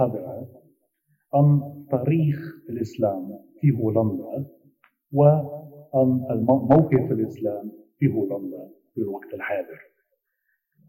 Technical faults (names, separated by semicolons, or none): none